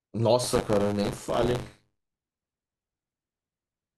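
From 0.43 to 2.37 s there's buffer tearing: writer and reader have slipped on the ring buffer, so each 10 ms period carries a sliver, maybe a sixth, of audio from a lap back, around 30 ms stale. That gives a robotic 100 Hz rattle riding the speech.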